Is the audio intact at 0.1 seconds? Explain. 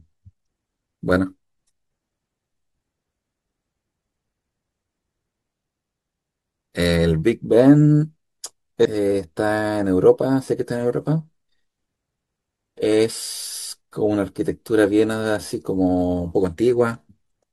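Yes, the audio at 0.1 seconds plays through cleanly, with no dropout, click, distortion or other fault at that moment.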